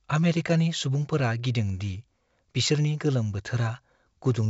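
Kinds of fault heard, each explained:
Nothing stood out on listening to this speech recording.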